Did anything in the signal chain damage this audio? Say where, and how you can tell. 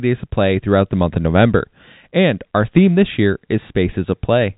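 No, nothing in the chain audibly damaged this speech.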